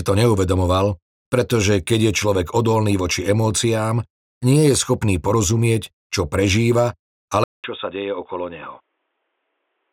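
At 7.44 s the recording most likely switched its input to a poorer device, after a gap of 200 ms. From there to the end, nothing passes above 3.8 kHz, so the sound turns dull and boxy, drops roughly 10 dB, and carries a faint new background noise, roughly 45 dB below the signal.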